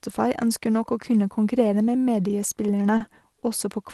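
Speech with two brief held sounds at 2.97–3.02 s and 3.40–3.44 s: each a short stall from a late packet, where the jitter buffer ran dry and stretched the last sound, with nothing lost. The call path's band limit around 12 kHz fits a super-wideband Opus setting.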